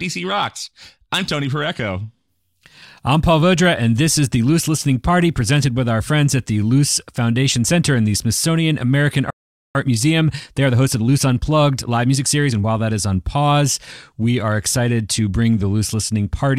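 At 9.30 s the speech stops dead and stays silent until 9.75 s, a playback stall of about 0.45 s, likely from the player running short of data or its thread being blocked. The waveform shows a flat gap and the spectrogram a clean vertical blank band.

From 9.75 s to 12.71 s the player makes up the lost ground with time-compressed catch-up, cutting and cross-fading small pieces to run at 1.15 times speed. The speech sounds rushed at normal pitch, and the spectrogram shows slightly squeezed syllables and unchanged harmonic spacing.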